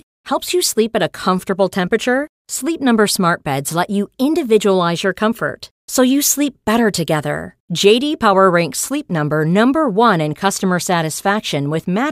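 Nothing here calls for comment: the speech carries on without a single technical fault to point to at any moment.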